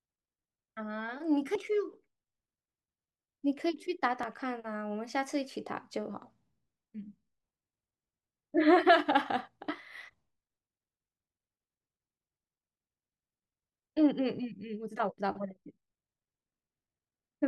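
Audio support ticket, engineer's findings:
Damaged data in the compressed stream, 1.55 s: short glitch, a blip of a few milliseconds. Decoder likely misreading a corrupt frame and resyncing on the next header.

Same fault, 4.21–4.24 s: longer glitch, about 36 ms. Pattern fits lost or overwritten bytes forcing the decoder to hunt for sync, rather than a clock glitch.

Time-stretched section, 14.66 s to end: pace jumps to about 1.64x, rushed, pitch unchanged. Likely stretching software dropping short segments to shorten the audio. Unchanged pitch rules out a sample-rate mismatch, which would raise it.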